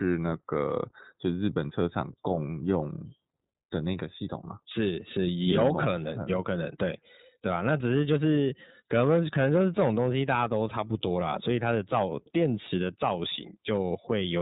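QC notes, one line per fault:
Throughout, iLBC codec: the speech band stops near 3.8 kHz, leaving it dull and narrowband. Each 30 ms frame's excitation is coded independently, which fits the 13.33 kbps mode and gives a plainly audible rough, slightly synthetic texture to the speech.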